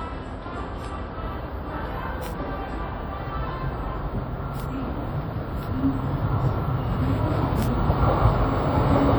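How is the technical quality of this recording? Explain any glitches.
The quality is fair but compromised: the whole clip carries plainly audible coding damage, and there are five isolated clicks on top of it.

The coding damage runs throughout and sounds like WMA compression, likely at a fairly low bitrate of around 48 kbps. A transform codec like this works on long blocks, so its quantisation noise smears over tens of milliseconds around each event instead of staying put. You hear a ringing, washy quality, and a hiss that swells and falls with the sound. Quieter detail tends to thin out because the encoder drops weak components altogether.

The clicks are bit error spikes at 0.85, 2.26, 4.60, 5.63 and 7.63 s. Each is a single corrupted sample, where one flipped bit in memory or on a digital link throws the value off by a power of two before it snaps straight back. Since it's just one sample, it comes across as a sharp tick covering the whole spectrum, with no relation to what the sound is doing at that moment.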